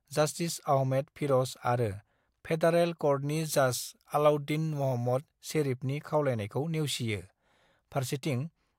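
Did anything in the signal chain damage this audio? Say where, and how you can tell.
Yes. From 3.29 to 5.29 s, just before "शेरिफनि खावलायनाइखौ", the speech turns thin, bright and hissy, with sibilants jumping forward. That is pre-emphasis left on: the treble lift matches the CD 50/15 µs curve, about 8 dB higher at 10 kHz than at 1 kHz. The fault sits at the playback stage, where the matching de-emphasis cut should have restored the original balance but was never applied to this stretch.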